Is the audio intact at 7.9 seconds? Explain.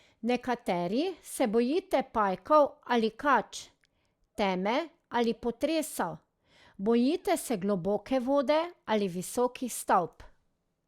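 Yes, the audio is intact at 7.9 seconds, with no dropout, click, distortion or other fault audible at that point.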